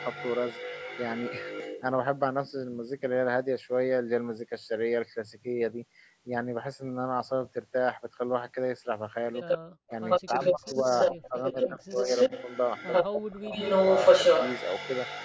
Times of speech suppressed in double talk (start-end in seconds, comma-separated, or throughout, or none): 9.42-9.46, 9.90-12.10, 13.08-13.55